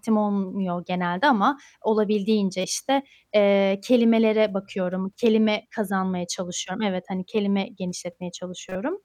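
At 2.61 to 2.64 s, and again at 8.69 to 8.76 s, a corrupt frame decoded breaks into the speech as a short chirp, squeak, blip or burst of noise peaking around -15 dBFS. The first spans what sounds like one damaged frame, the second roughly two in a row. Flipped bits made the decoder rebuild energy at the wrong frequencies. Unlike a click, each burst lasts a full frame.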